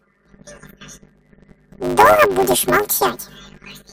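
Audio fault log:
Throughout: planar audio read as interleaved. Each 10 ms block stores all of one channel's samples followed by all of the other's, but playback treats them as alternating left-right pairs. Every block therefore plays twice at double speed, once from each channel, which keeps the overall pace of the speech correct. Because the blocks are so short, this produces a robotic buzz at the 100 Hz block rate rather than an obvious octave jump.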